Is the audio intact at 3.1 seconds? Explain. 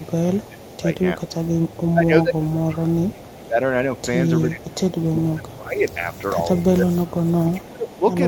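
No. From 0.02 to 8.0 s there is an echo leak: a faint, delayed copy of the speech trails about 360 ms behind, roughly 25 dB down, likely from a loudspeaker echo canceller missing part of its microphone pickup. Unlike room reverberation, it comes back as a distinct repeat rather than a smooth decaying tail.

Between 1.93 and 3.59 s there is also speech suppressed in double talk: the speech dips by as much as about 20 dB and thins out, in pieces totalling roughly 1.5 s. The likely cause is the canceller mistaking overlapping talk for echo. It sounds like ducking and muffling during overlap, not the hard, silent gaps of a network dropout.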